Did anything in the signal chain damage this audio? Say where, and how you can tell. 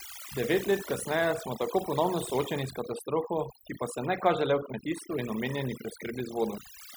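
Yes, overdone noise removal at the call-processing stage damages the whole speech clip. The background drops and breaks up into twinkling specks, and quieter parts of the voice get gated away. On a spectrogram, the gaps look blank with isolated dots, and the speech harmonics look ragged and holed.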